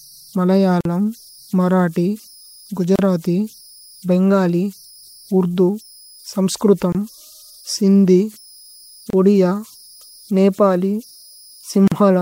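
From the start and throughout the speech, converter idle tones sit about 30 dB below the signal. A delta-sigma converter running without dither settles into repeating bit patterns when its input is small, and here those patterns produce a faint whistle somewhere around 5 kHz that stands out in pauses and turns grainy beneath quieter passages. On a spectrogram this appears as a thin horizontal line near 5 kHz running across the whole clip.

Five gaps at joins of encoded pieces follow: 0.81 to 0.85 s (45.5 ms), 2.96 to 2.99 s (32 ms), 6.92 to 6.95 s (24 ms), 9.10 to 9.13 s (29.7 ms) and 11.88 to 11.92 s (40.5 ms). The pieces were encoded separately and joined untrimmed, so each keeps its encoder start delay and its padded final frame. The speech drops out abruptly and resumes where it stopped. The waveform shows flat near-silent slots with slightly smeared edges, and the spectrogram shows narrow vertical blank bands.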